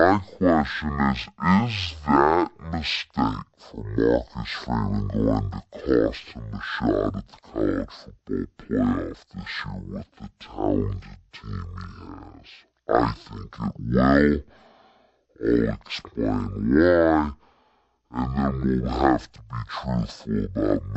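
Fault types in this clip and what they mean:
Stereo read as mono: the speech drags at half speed, a full octave low, because interleaved left and right samples play back one after another as a single channel.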